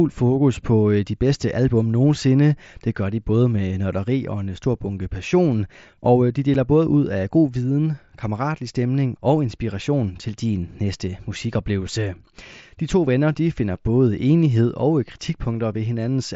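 A speech clip carried over a wideband mSBC Bluetooth headset link, with one instance of unconcealed Bluetooth headset packet loss at 6.54 s, between "passion og øh de" and "både ud af god". A gap of about 7.5 ms, which fits a single lost headset packet, was filled with silence or an idle pattern instead of being patched over, so the speech drops out abruptly. On a waveform this appears as a flat notch with sharp vertical edges. A spectrogram shows a thin vertical gap across the band up to 8 kHz.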